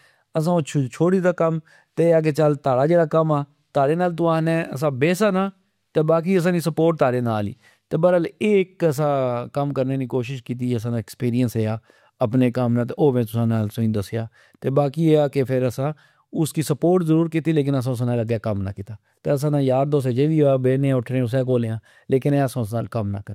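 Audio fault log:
22.30 s, bit error spike. A single sharp tick is heard just after "اٹھنے اسہ کول یا". It lasts only three samples, then the waveform snaps back. The peak reaches about -26 dBFS. A flipped bit in a stored or transmitted value makes the sample jump by a power of two. Such a brief jump has energy spread across the whole spectrum. So it sounds like a dry click with no link to the speech around it.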